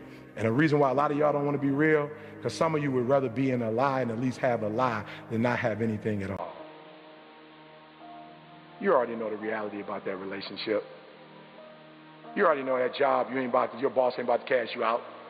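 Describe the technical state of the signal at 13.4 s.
At 13.4 s the sound is still band-limited, with nothing above 4.6 kHz, from 6.37 s to the end. This is likely an input switched to a poorer device. A 20 ms gap at the switch and a new noise floor about 30 dB down, at unchanged level, set it apart from a plain filter.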